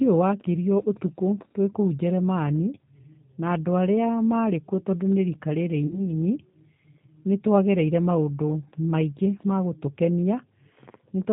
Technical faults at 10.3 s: G.729 codec

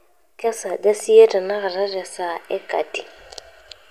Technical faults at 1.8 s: none

